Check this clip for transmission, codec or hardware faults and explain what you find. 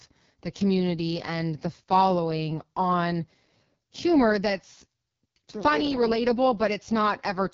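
The speech carries one fault, present for the whole clip: AMR wideband (HD Voice) codec coding at its lowest rate. Throughout, the voice sounds rough and raspy, with a grainy texture and a dull top end that stops near 7.3 kHz. AMR-WB rebuilds speech below 6.4 kHz from a pulse-excited vocal tract model and fills the band above with shaped noise. The heavy damage fits the 6.6 kbit/s mode, where too few bits remain to model the excitation faithfully, so the voice turns harsh.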